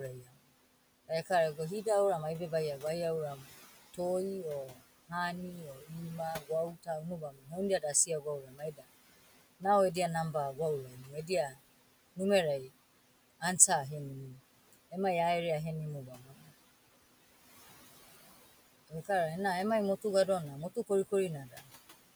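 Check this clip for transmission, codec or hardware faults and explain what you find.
The processing chain has two faults, both from the noise suppressor; the room noise it acts on sits about 17 dB below the speech.

Noise suppressor artifacts run throughout: the suppressor pulls steady-noise bands down by about 17 dB frame by frame, so leftover background pumps between and under words.

Speech cut by the noise suppressor occurs at 0.2–1.86 s, 3.38–13.42 s, 16.07–16.51 s, 18.15–19.09 s and 20.02–21.69 s. The suppressor mistakes quiet speech for noise and drops it by about 11 to 16 dB, so soft consonants and word endings sound swallowed. This totals a few seconds, mostly in the long middle stretch.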